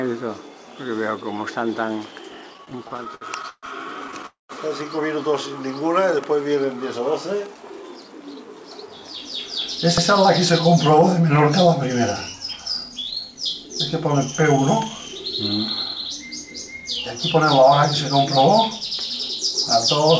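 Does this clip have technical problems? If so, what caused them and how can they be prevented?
Yes. Packets reached the receiver late or more slowly than they were played, so its jitter buffer kept running dry between 2.54 and 3.66 s, producing repeated stalls (stutter). Each time the receiver extended the last sound to bridge the wait. There are fourteen small stalls adding up to about 336 ms of filled-in audio, the longest 132 ms, covering roughly 30% of that stretch. A briefer burst at 4.08 to 4.26 s has four tiny stalls of no more than 12 ms each. Nothing is lost, but the sound drags and stammers. A larger or more adaptive jitter buffer, together with a more stable network route, would prevent this.

From 4.26 to 4.52 s there is a call audio freeze. The flow of packets was likely held up long enough for the buffer to empty. The receiver carried the last sound forward as a fading fill of about 232 ms, and roughly 150 ms of that decays into silence before the audio resumes exactly where it stopped. 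The result is an inserted hole rather than missing material. Reducing congestion on the link, or prioritising the call traffic, would prevent this.

Between 6.99 and 8.53 s a jitter buffer speed-up occurs. The buffer held more audio than its target, and the receiver trimmed it by repeatedly cutting out pitch-period-length slices, removing around a fifth of a second in total. The audio plays at about 112% speed with unchanged pitch, so this passage sounds hurried. Smoother packet delivery, or gentler buffer shrinking spread over a longer period, would prevent it.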